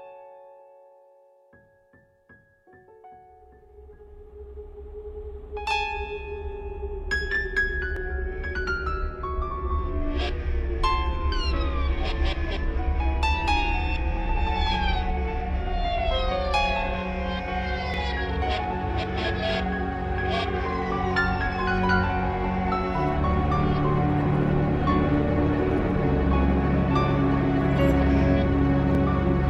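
Audio missing between chunks at 7.97, 17.94 and 27.91 s: the sound jumps forward abruptly, each time losing roughly 30 ms with the two sides butted together. The 10-second spacing points to a likely recorder dropping audio while switching chunks.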